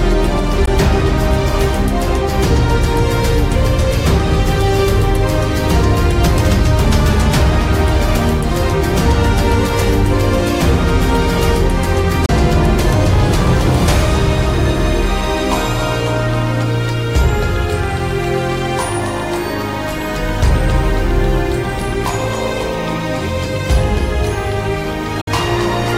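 Audio packets that likely arrived too late at the headphones were discarded, causing Bluetooth dropouts: silent gaps at 0.66 s (about 14.5 ms, fitting one lost packet), 12.26 to 12.29 s (29 ms), and 25.21 to 25.27 s (58 ms), after which the audio resumes further along.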